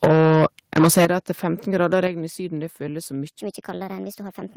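The microphone input level was likely set too high at the start, so from 0.03 to 0.46 s the speech peaks run about 12 dB past the converter's ceiling, and roughly a fifth of the samples are flattened at the converter's limit. The tops of the loudest syllables are sheared off, leaving a harsh, crackly buzz on them. This is microphone overload. Almost immediately, at 0.05 s, the microphone volume is stepped down by about 4 dB, most likely the call software's automatic gain reacting to that clipping. Voice and background drop together in a single audible step, but not far enough to clear the distortion.

The same microphone overload returns from 0.76 to 1.05 s, with peaks about 10 dB over the limit and again around a fifth of samples clipped. That gritty, broken edge is back on the loud syllables. Right at 1.05 s the level is pulled down hard, by about 10 dB, and the whole sound abruptly turns much quieter. 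A further step down of about 6 dB follows at 2.07 s, just before "regn i", heard as another sudden drop in loudness with no distortion leading into it.

From 3.40 s to the end, the section plays at the wrong speed, about 1.32 times too fast. This is likely a playback or resampling clock mismatch. Speed and pitch rise together by roughly five semitones, so the speech suddenly sounds rushed and chipmunk-like for its final second.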